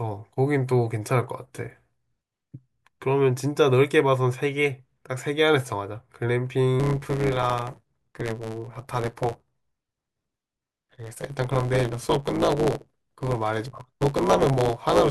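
From 6.79 s to the end, a block size mismatch truncates each block's tail, adding a 109 Hz buzz and running the speech 1.09 times faster with its timbre intact.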